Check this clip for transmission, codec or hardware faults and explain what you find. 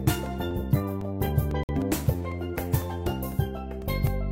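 One fault is audible, a short dropout consistent with a Bluetooth stall. From 1.63 to 1.69 s the sound cuts to about 55 ms of silence and then resumes. The likely cause is radio interference delaying packets on the wireless link, so the headphones' receive buffer emptied and playback halted until the resent data arrived. The gap is brief and clean, with no smearing or noise, just an abrupt hole before the audio continues.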